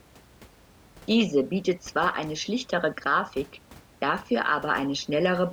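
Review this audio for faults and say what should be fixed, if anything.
Nothing in the recording needs fixing. The room's background noise sits about 26 dB below the speech and belongs to the recording itself.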